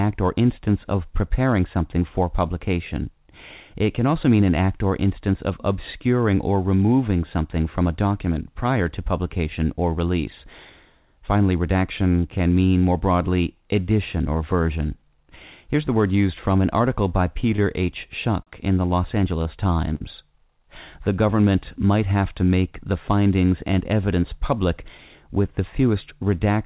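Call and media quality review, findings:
Short stall from a late packet, four events: 17.56–17.60 s after "from an article by", 18.43–18.49 s before "in the", 19.43–19.47 s, and 19.95–20.02 s. Jitter buffer underrun on a late packet. Receiver stretched the last sound by 20, 40, 24 and 54 ms, then resumed at the same point. Nothing dropped. Each sound held too long, with a slight buzz or dip. Playout delay grew by the same amounts.

Call path band-limited, nothing above 4 kHz, which fits G.711 mu-law at 64 kbps.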